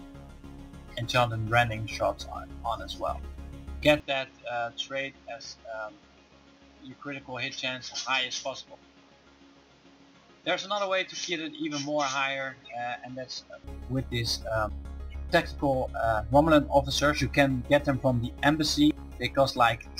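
Input likely switched to a poorer device, 4.0 to 13.64 s: the sound dulls with nothing above 7.2 kHz, drops around 5 dB, and gains new background noise.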